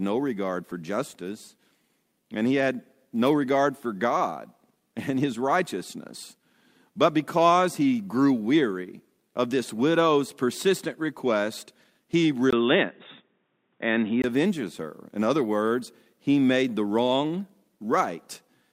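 Input switched to a poorer device, 12.51 to 14.24 s: after "widow's persistent request he", a 20 ms gap, then dull speech cut off above 3.7 kHz, likely a narrower-band microphone, until "avenges her".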